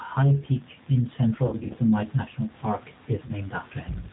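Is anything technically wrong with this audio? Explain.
Yes, there are two technical faults in this speech clip.

The G.729 codec affects the whole clip, and its damage is plainly audible. The audio is rebuilt from a vocal tract filter model, a pitch predictor and a few pulses per 5 ms subframe rather than from the waveform itself. The sound fits the G.729A variant at 8 kbit/s. Nothing above 4 kHz survives, so the speech sounds muffled and dull, with a rough, slightly synthetic texture.

VoIP packet loss concealed by the speech codec occurs from 1.46 to 1.75 s and again from 3.26 to 3.34 s. In the first stretch about 150 ms of audio is missing, scattered over 240 ms, with the longest gap 60 ms. That fits five lost packets. The second stretch fits one lost packet of about 30 ms. To fill each gap the decoder repeats its last pitch and filter at falling gain, so the speech smears into a fading buzzy tone or coloured noise. 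Because each frame builds on the previous one, the speech stays weak or distorted briefly after each gap.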